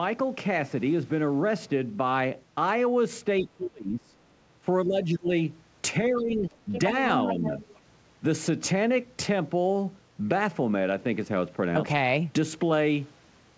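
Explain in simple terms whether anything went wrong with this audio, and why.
A couple of things go wrong here, both around the middle of the clip.

First, there's speech suppressed in double talk. The main talker's voice dips or partly drops out from 3.41 to 4.15 s (the deepest of these dips), again from 4.85 to 5.31 s and from 6.1 to 6.54 s, plus a tiny blip at 7.35 to 7.4 s. It's likely that the other person on the call was talking at the same moment, and the echo canceller, unable to tell the two apart, just turned everything down.

Second, there's the other side's voice leaking through. A second voice sneaks into the recording in short scraps: very faintly at 6.17 to 6.23 s and 6.49 to 6.54 s, then more noticeably at 6.72 to 6.8 s and for a longer stretch from 7.12 to 7.79 s. The likely cause is that the talker's loudspeaker was playing the far end and the echo canceller didn't fully scrub it out of the mic.

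The sound also tops out around 8 kHz, which is just how this call codec carries it, not a fault.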